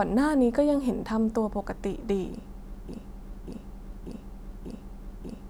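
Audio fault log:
2.88 to 5.49 s, broken-record loop. From 2.88 s the speech stops moving forward. One fragment of about 0.59 s plays, then plays again, exactly the same, back to back. It repeats four times and runs to the end of the clip. No new speech follows, so whatever should have been heard in that stretch is gone. The likely cause is a stalled player, encoder or stream that kept resending the last piece it held in memory.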